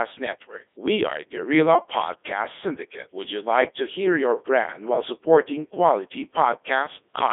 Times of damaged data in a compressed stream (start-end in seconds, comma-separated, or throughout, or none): none